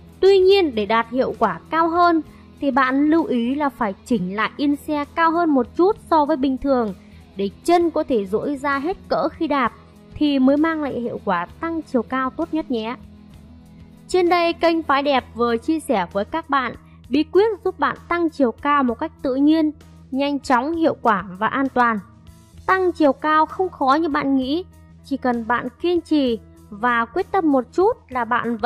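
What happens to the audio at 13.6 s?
Nothing goes wrong at 13.6 s; the audio plays through that moment intact.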